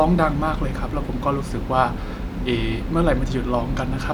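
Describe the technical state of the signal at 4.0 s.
The speech signal at 4.0 s is intact, with no audible fault at that moment.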